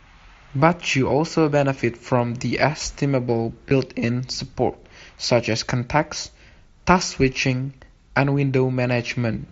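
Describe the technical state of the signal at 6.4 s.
At 6.4 s the speech comes through the Bluetooth mSBC headset link intact, with no fault at that moment.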